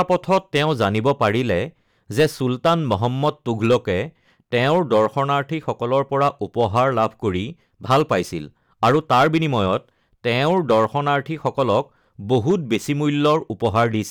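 A harsh, gritty fuzz rides on the louder syllables from start to finish, with crackle on each peak. This is hard clipping. The speech is driven about 9 dB past what a stage in the chain can pass, so every peak that crosses that ceiling is sliced flat. Only a small share of the waveform, somewhere around one or two percent, gets cut. The squared-off tops add high harmonics that the speech never had, which gives it that brittle edge.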